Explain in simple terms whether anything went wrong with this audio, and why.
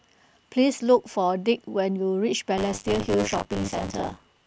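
From 2.57 s until the end of the clip, the speech picks up a harsh, robotic buzz, a rattle about 100 times per second that stays on whenever there is sound. This is buffer tearing. The program feeding audio and the hardware playing it have fallen out of step. In every short chunk, roughly a third of the sound is stale audio from a few tens of milliseconds earlier, joined abruptly to the fresh audio, and those repeated hard joins create the buzz.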